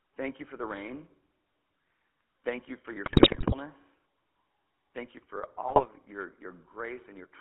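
Throughout, the GSM full-rate codec, consistent with 13 kbps, rebuilds the speech from a pulse-driven vocal-tract model within a 200 Hz to 3.4 kHz band, sounding plainly buzzy and gravelly. GSM bit errors hit from 3.06 to 3.55 s, right after "you for your", and from 5.68 to 5.86 s. Corrupted filter, pitch and gain values distort frames into squawks, pops and gargling.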